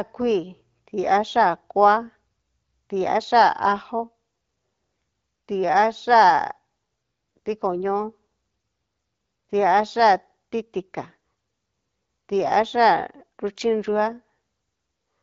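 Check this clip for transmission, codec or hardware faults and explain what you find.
Nothing wrong can be heard in the speech, which is carried over AMR wideband (HD Voice) at 12.65 kbit/s, a rate at which the codec leaves only light traces of its coding.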